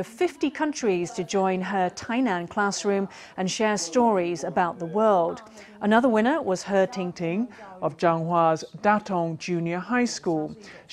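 From 7.12 s to the end, a section at the wrong speed plays at 0.893 times normal, likely from fitting it to the wrong clock. Sound turns slower and about two semitones deeper at once, a steady drop, unlike wow's wavering or a pitch shift that keeps timing.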